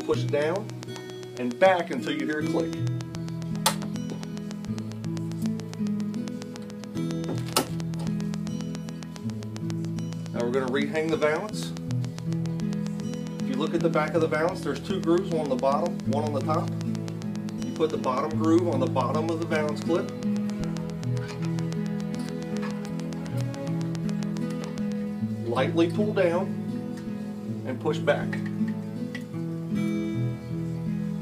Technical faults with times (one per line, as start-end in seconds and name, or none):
0.01-24.93 train of clicks